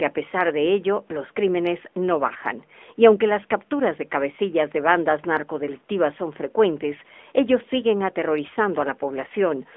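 Throughout, the speech passes through the AMR narrowband mobile codec at 10.2 kbps, which rebuilds the voice from a few pulses per frame and keeps only 250 Hz to 3.5 kHz. The damage is plainly audible: a thin, buzzy, synthetic telephone voice.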